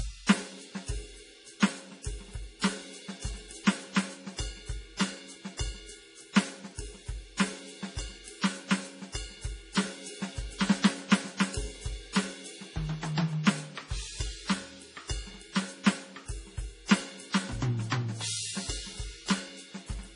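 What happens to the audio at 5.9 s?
At 5.9 s the music carries the same heavy damage heard across the whole clip, likely from low-bitrate MP3 compression around 32 kbps. Nothing remains above 10.5 kHz, and weak frequency lines flicker frame to frame, giving a watery, swirly texture with smeared attacks.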